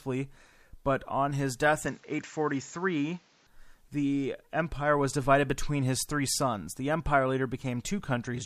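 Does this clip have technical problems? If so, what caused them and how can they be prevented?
Yes. From 1.86 s to 3.47 s the sound turns dull and narrow. Nothing comes through above 7.6 kHz, and a new background noise sits roughly 35 dB below the signal. There is no gap and no clear level jump at either edge. This points to an input switched to a poorer device. The recording likely jumped to another microphone or a headset call profile, then returned. To prevent it, lock the input device and disable automatic switching before recording.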